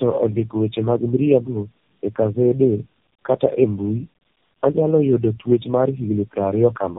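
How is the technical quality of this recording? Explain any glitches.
Quality's pretty rough, honestly. Throughout, there's tandem speech coding: three low-rate speech coders chained, each recoding the last one's damage, so it's muffled, warbly, gritty, and dead above 3.7 kHz.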